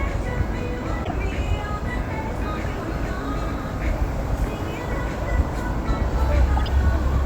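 At 1.04 s a corrupt frame is decoded. Damaged bits in the compressed stream were played as if valid, so misread codes put energy at the wrong frequencies. A brief noisy chirp cuts across the sound until 1.12 s, which fits a single damaged frame. It recurs from 6.57 to 6.68 s as a longer burst, which suggests several frames in a row. Both peak at about -15 dBFS.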